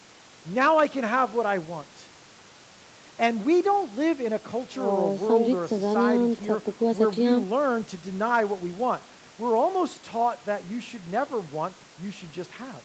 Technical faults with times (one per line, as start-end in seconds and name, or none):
none